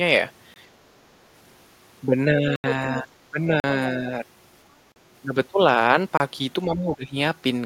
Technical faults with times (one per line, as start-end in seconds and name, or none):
0.54-0.56 block of digital silence
2.26-2.43 speech suppressed in double talk
2.56-2.64 block of digital silence
3.19-3.38 speech suppressed in double talk
3.60-3.64 block of digital silence
3.93-4.07 speech suppressed in double talk
4.92-4.96 block of digital silence
6.17-6.20 block of digital silence
6.65-7.16 speech suppressed in double talk